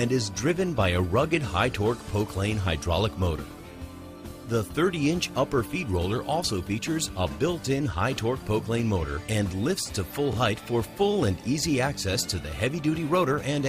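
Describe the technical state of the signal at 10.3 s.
At 10.33 to 10.36 s the audio stutters, with a brief click as a short stretch of sound plays a second time. This is overlapping chunks. The signal was handled in blocks of 6.0 s, and here a block begins before the previous one has finished, so 25 ms of audio is repeated at the join. That duplicated fragment breaks the continuity of the waveform, producing the audible catch at that moment.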